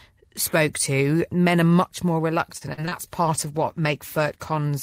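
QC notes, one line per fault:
2.57–2.93 s, repeated packet loss (robotic sound): right after "are much more", the audio breaks up in four quick holes, the longest about 42 ms. Around 121 ms is patched by stretching the preceding sound and about 80 ms is simply missing, so roughly a third of this stretch is concealed rather than real. Because the repeated fills come close together, the sound turns choppy.
3.27–4.71 s, call bitrate drop: the audio turns coarse and dull. The loss of detail and high end points to the encoder being pushed from around 64 kbps down to around 15 kbps after the link's bandwidth estimate fell. With so few bits, the codec quantises roughly and cuts the upper frequencies, which gives the muffled, watery texture. It stays at its worst for about 1.4 s.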